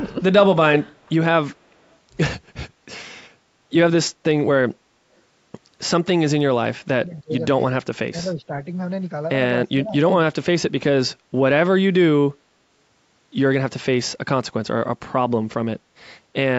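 Faint echo leak appears at 0.96–1.06 s and 1.78–1.96 s, and again at 7.13–7.21 s: a copy of the speech trailing it by 307 ms, roughly 40 dB down (nearer 35 dB the third time), likely from a far-end loudspeaker path the echo canceller did not fully remove. Speech suppressed in double talk also occurs from 6.79–7.42 s, 8.09–8.52 s and 9.69–9.96 s. The talker dips by up to about 30, 15 and 25 dB, respectively, as the canceller likely mistook overlapping talk for echo and attenuated it.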